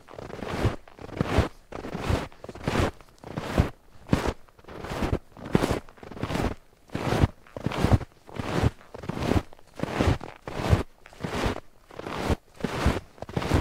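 At 4.29 s and again at 12.33 s, compressed frames are skipped. The sound jumps ahead by about one 20 ms frame, then by roughly 150 ms.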